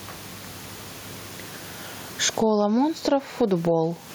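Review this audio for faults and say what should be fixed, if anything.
Gain pumping runs through the whole recording. The gain swings by roughly 15 dB, and the quiet room tone sits about 37 dB under the speech. Loud and soft syllables sit unnaturally close in level, giving a squashed sound. The likely cause is input gain set far too high, with a fast limiter or compressor clamping down on each loud sound and releasing in the gaps. To prevent it, lower the microphone gain and turn off or slow any automatic gain control or limiter in the chain.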